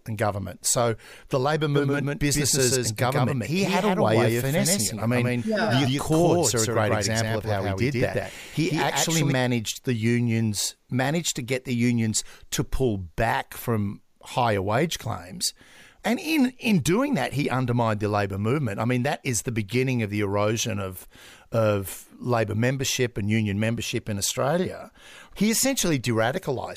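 From 1.74 s, just after "the labor", to 9.32 s, just before "the unions managed to", the speech plays over itself as a doubled audio track. A second full-band copy trails the original by roughly 150 ms at about the same loudness, likely from a second capture path or a misaligned edit. Unlike an echo or room reverb, the copy neither decays nor adds room colour, and it switches on and off abruptly at both ends.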